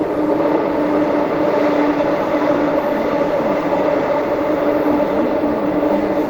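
No technical faults are audible.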